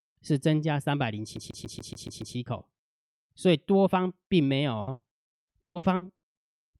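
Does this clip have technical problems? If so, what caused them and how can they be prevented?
Yes. From 1.37 to 2.36 s the speech hits a CD stuck on one turn: a scratch sends the laser back to the same spot, so one 142 ms fragment plays seven times, each with a brief mute. Unlike packet loss, the repeats are identical and evenly spaced. Cleaning or replacing the disc, or ripping it with an error-checking ripper, prevents this.

From 4.81 to 6.25 s, repeated packet loss (robotic sound) sets in. Nine gaps, the longest 100 ms, are patched by stretching the preceding sound, so about 37% of the stretch is filled in. This gives a choppy sound with pieces missing rather than an exact looping fragment. A steadier network connection, a larger jitter buffer or forward error correction would prevent it.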